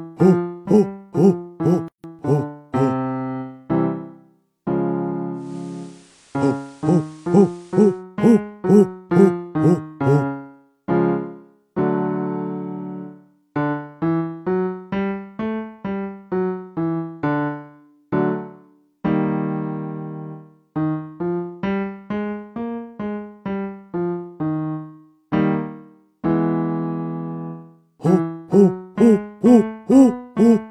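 The audio has two faults. A playback stall, likely from the player running short of data, cuts the sound to silence from 1.88 to 2.04 s, a gap of about 157 ms, before it resumes. Then, in digital radio blending to analogue, the receiver loses the digital stream and cross-fades over 229 ms to the FM broadcast from 5.32 to 8.04 s. Hiss rises to roughly 30 dB below the signal, and the level holds steady.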